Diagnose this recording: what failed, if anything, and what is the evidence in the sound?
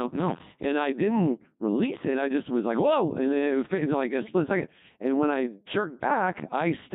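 Codec 2 vocoder damage runs through the whole clip, so the failure sits at the codec stage. The speech comes out robotic and buzzy from start to finish, with the natural texture of the voice replaced by a synthetic, tonal quality. The codec transmitted only pitch, voicing, energy and a coarse spectral envelope, and the decoder rebuilt the voice from sine waves instead of keeping the waveform. The heavy degradation fits a rate of around 2.4 kbit/s.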